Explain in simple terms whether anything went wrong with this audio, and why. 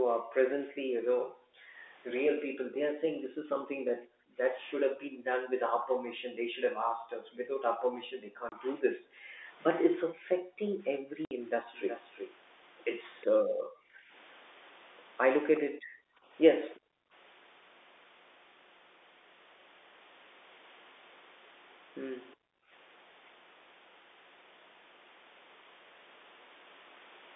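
Several things went wrong, all typical of a phone call with a loudspeaker on one end.

Background gated by the echo canceller: the room sound drops away almost to nothing for about seven seconds in total between 0.0 and 11.42 s, and again at 13.31–14.11 s, 15.61–17.13 s and 22.36–22.71 s. The echo canceller cut the microphone sharply while the loudspeaker played, then released it.

Packet loss filled with silence: there are two abrupt gaps in the speech, a 30 ms hole at 8.49 s and a 60 ms hole at 11.25–11.31 s. Audio packets went missing and were replaced by silence, leaving hard-edged dropouts that fit one and then two lost packets.

Echo leak: from 11.73 to 13.25 s a fairly quiet copy of the speech trails the original by about 365 ms. Fainter scraps of it return at 15.56–15.60 s and 16.74–16.80 s. The likely cause is a loudspeaker whose echo canceller didn't fully remove what its microphone picked up.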